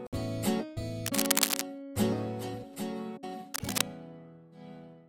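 From 1.06 to 1.65 s and again from 3.54 to 3.82 s, bursts of cable scratch noise sit somewhat above the sound: dense, irregular scratching and rustling, likely from a worn cable or connector being moved so its contact resistance fluctuated rapidly.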